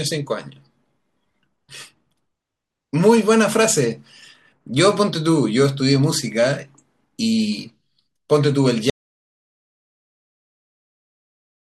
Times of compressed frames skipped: none

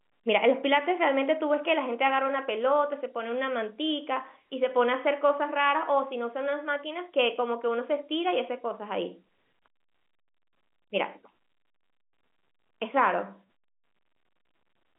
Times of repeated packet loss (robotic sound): none

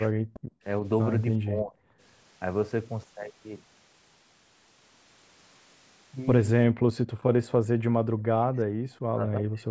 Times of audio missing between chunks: none

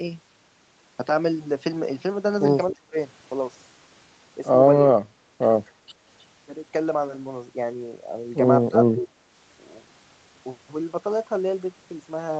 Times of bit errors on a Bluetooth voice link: none

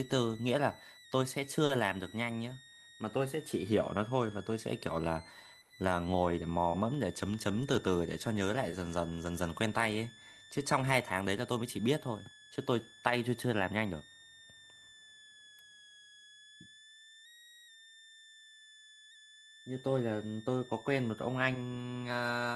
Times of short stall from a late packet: 1.65-1.71, 5.61-5.72

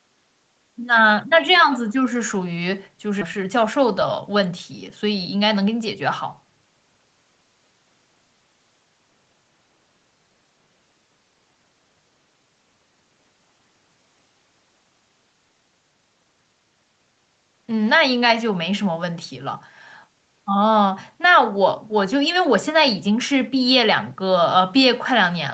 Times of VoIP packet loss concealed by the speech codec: none

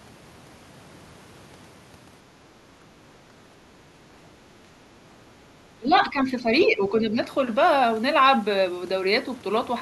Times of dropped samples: none

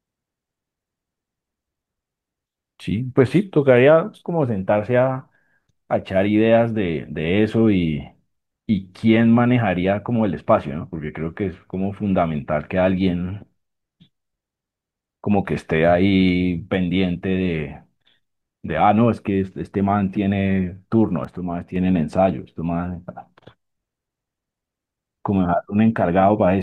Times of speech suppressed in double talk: none

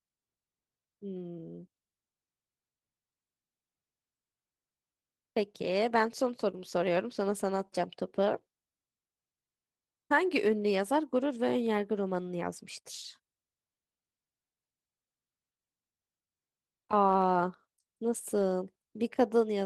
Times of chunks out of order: none

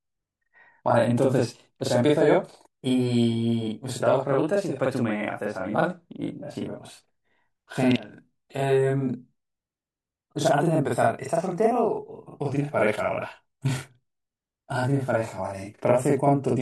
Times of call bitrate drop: none

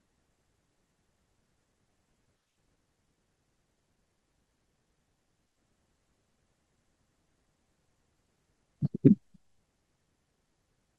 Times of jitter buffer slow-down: none

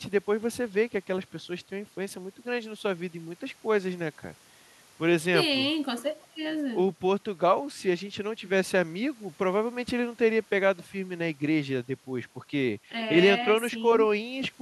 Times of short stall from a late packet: none

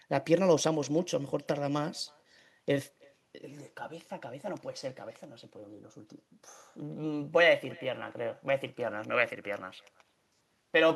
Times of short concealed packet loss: none

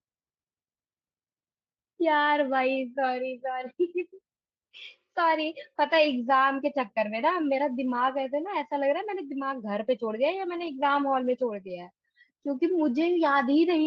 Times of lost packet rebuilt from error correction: 10.49-10.67

